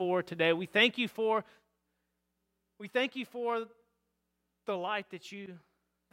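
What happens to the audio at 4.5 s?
At 4.5 s the speech plays through intact, with no dropout, click or distortion, and any level change there is a smooth fader-like move rather than a fault.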